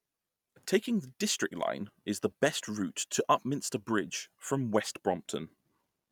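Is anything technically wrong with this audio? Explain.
No, nothing technically wrong can be heard here.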